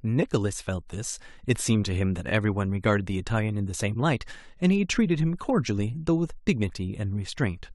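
Repeated frames: at 2.29 to 2.31 s a compressed block was sent twice, so the decoder replays 23.2 ms of speech, heard as a brief stutter.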